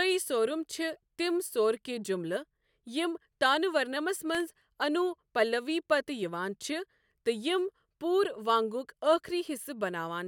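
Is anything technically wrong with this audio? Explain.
Yes. There is a burst of processor overload crackle from 4.35 to 4.62 s, right after "یِم تانہ ورنمس". The processor falls behind and misses a run of audio buffer deadlines in a row. Each missed buffer is filled with a stale scrap of earlier audio, joined with hard edges. The sound points to very short buffers, under a millisecond each, with several missed back to back. It is heard as a gritty, tearing crackle over the speech that stops once the load clears.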